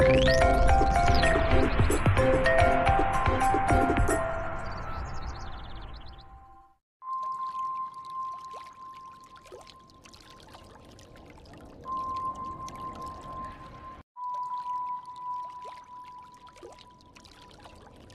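No faults heard anywhere in the audio.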